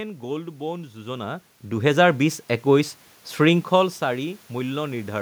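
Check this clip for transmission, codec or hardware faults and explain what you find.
One fault stands out: automatic gain rising, from 1.62 s to 4.77 s. Over those three seconds the level climbs by about 6 dB as the gain control, judging the input too quiet, steadily turns itself up. The telltale sign is that the room noise rises along with the speech, so the whole sound swells together. On the waveform the envelope widens gradually across that span, and on a spectrogram the background floor brightens in step with the speech. The talker's own movements, around one second and again around three and a half seconds, change only the speech level and leave the room noise where it was, which sets them apart from the gain ramp.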